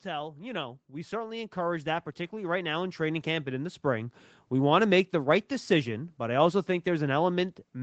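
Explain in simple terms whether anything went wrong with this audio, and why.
One thing went wrong: automatic gain rising. From about 0.05 to 4.17 s, the call's volume control decided the speech was too quiet and kept turning it up, so the voice and the background noise both swell steadily louder over those four seconds.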